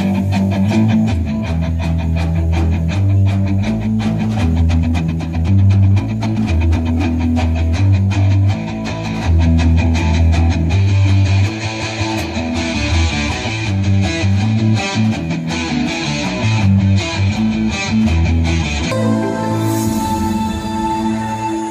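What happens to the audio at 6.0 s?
At 6.0 s the clip is inside a time-stretched section running from 4.55 to 6.93 s, likely where software squeezed that stretch to fit a set length while holding pitch. The sound runs 1.45 times too fast, rushed, with unchanged pitch.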